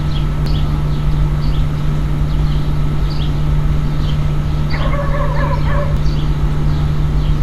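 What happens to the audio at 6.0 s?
Damaged data in the compressed stream hits from 5.97 to 6.00 s: the decoder misreads corrupted frames, loses sync and hunts for the next header, producing a brief chirp, squawk, click or short hole. A spectrogram shows a short broadband smear; the waveform shows a discontinuity.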